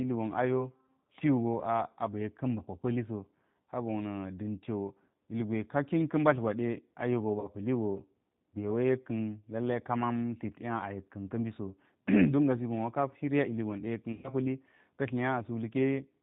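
Throughout, the G.729 codec is plainly audible, with rough, synthetic speech and nothing above 4 kHz. This fits 8 kbit/s G.729A and shows as a hard spectral ceiling.

At 7.40–7.49 s (40 ms lost) and 14.12–14.31 s (120 ms lost), there is VoIP packet loss concealed by the speech codec. The decoder extrapolates from its last pitch and filter into a fading buzzy tone or coloured noise, which shows as smeared, repeated harmonics or noise and a tapering waveform envelope.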